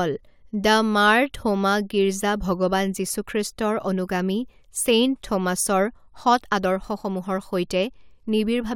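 Nothing technically wrong turns up in this speech recording; there's no fault to point to at any moment.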